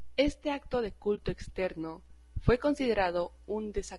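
A speech recording with plainly audible low-delay AAC compression throughout. The voice has a rough, grainy texture, with noise filling the gaps between pitch harmonics and a top band that sounds thin and artificial. This is likely AAC-ELD, the low-delay codec used in video calls. It codes about 500 frequency lines a frame with a low-delay window, so at a rate that fits around 32 kbps the coder has too little detail left to render the voice cleanly.

There is also AAC frame loss with muting from 1.15 to 1.19 s, between "acto de" and "externo fue". The decoder zeroed the spectrum of the missing data, which fits a single lost frame of about 20 ms. The overlapping transform windows fade the audio down and back up on either side, so the result is a brief, soft-edged dip.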